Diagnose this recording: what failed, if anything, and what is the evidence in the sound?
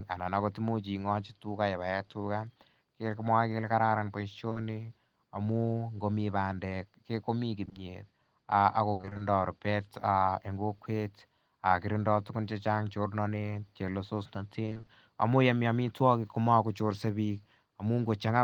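Short concealed packet loss at the network stage. Brief smears are audible at 4.49 to 4.57 s and 7.65 to 7.77 s. Each is a run of 20 ms holes. The receiver continued the last sound to fill each hole, then blended back into the real audio.

Repeated packet loss (robotic sound), also at the network stage. From 8.93 to 9.21 s, six gaps cut in, the longest 60 ms, with over half the stretch patched. From 14.65 to 14.89 s, six 20 ms gaps fill half the span. The patches follow each other closely, giving a choppy sound.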